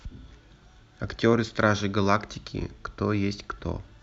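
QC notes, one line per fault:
No technical faults are audible in this speech recording, and the signal holds steady with nothing in it calling for correction.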